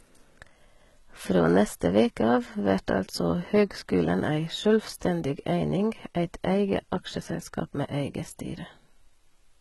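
A speech recording that has most likely passed through heavy HE-AAC compression at a very low bitrate, around 16 kbps, where only the lower spectrum is truly coded. Throughout, the treble is synthesised by copying lower bands upward, so s sounds come out gritty and metallic, and nothing reaches above 11.8 kHz.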